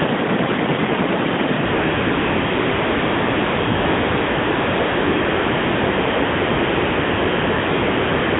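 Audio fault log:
1.66 to 1.74 s and 1.76 s to the end, AMR comfort noise: the phone judged the line silent and stopped sending speech frames, first for 80 ms, then for about 6.6 s, so a smooth synthetic hiss replaces the real background within the AMR-NB band, where codec damage is light.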